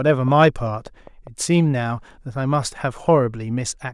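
A speech clip with a train of clicks from 0.07 to 1.28 s: about seven near-identical ticks at a steady 5 per second, roughly as loud as the speech. Their even spacing and matching shape set them apart from random crackle. They likely come from electrical interference or a faulty connection or power supply.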